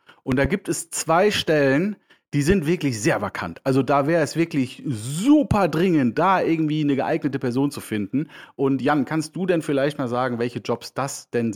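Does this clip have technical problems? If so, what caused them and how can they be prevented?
Yes. There is a loud pop at 0.32 to 0.48 s, heard as two quick thumps peaking roughly 15 dB above the speech, and another at 2.50 to 2.54 s, a single pop around 10 dB up. The likely cause is a voltage pulse from a plug, switch, static discharge or driver glitch, shaped by later circuitry. The speech continues underneath each pop. On a waveform each pop shows as a tall spike, and on a spectrogram as a thin vertical stripe across the spectrum. Securing connections and using grounded, static-safe cabling before recording would prevent it.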